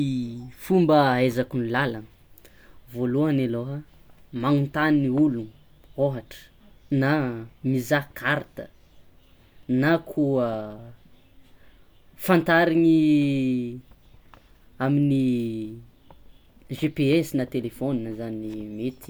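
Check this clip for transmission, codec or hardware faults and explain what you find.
Nothing in the speech recording points to a transmission, codec or hardware fault.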